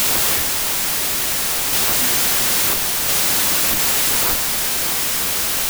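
Wrong sample width runs through the whole clip: audio stored as packed 24-bit samples is being read as 16-bit. Each 3-byte sample gets split across 2-byte reads, so many values are built from mismatched bytes, and only some keep the real signal's top bits. The result is loud, harsh noise with the speech buried inside it, playing at about two thirds of its proper speed and pitch.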